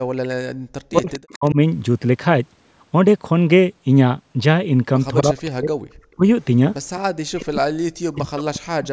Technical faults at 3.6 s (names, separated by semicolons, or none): none